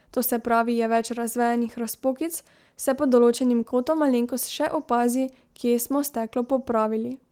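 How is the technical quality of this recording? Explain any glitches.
The recording has no glitches, and its Opus voice compression, running in hybrid mode at 24 kbps with the full audio band kept, leaves only light coding traces on the speech.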